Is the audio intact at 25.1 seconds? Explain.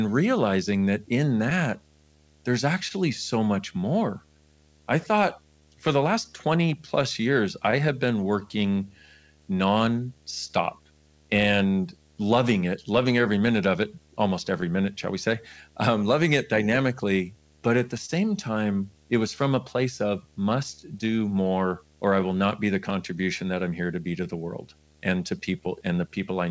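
No. At 25.1 s a low, steady buzz with a fizzy hash above it sits under the speech, about 35 dB below it. This is video or display buzz: a screen or video cable is coupling into the audio path, and the hum's fundamental sits at 75 Hz, matching the picture's field rate. It runs through the whole clip, so it is present at this moment too. Because the audio came through a G.722 call path with nothing above 8 kHz, no high line-rate whine can be heard alongside it.

The tempo around 25.1 s has a faint unevenness, with small hiccups where short pieces seem to repeat. This comes from clock drift between sender and receiver. The sender's clock runs roughly 1.5% slow, so the receiver's jitter buffer keeps draining. To keep the buffer from running dry, the receiver has to stretch the audio by repeating bits, and these tiny stumbles recur at uneven intervals all through the clip.

Those repeats are the repeated timing corrections, which run from 0.10 s to 26.33 s and so cover this moment. 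Playback runs at about 99% speed, and the corrections add roughly 200 ms over the stretch. Every correction goes the same way, lengthening the sound slightly. Each one is small and irregularly spaced, so it comes across as a brief hitch or a slightly unsteady rhythm rather than an obvious skip.

Scattered short gaps between 1.50 s and 25.68 s also include this moment. Around fifteen brief holes from late or lost packets are spread across that span, the longest about 30 ms. The receiver patched each one by continuing the last sound, concealing about 200 ms in total, roughly 1% of the span. Each patch is heard as a tiny tick, smear or hiccup while the speech stays clear.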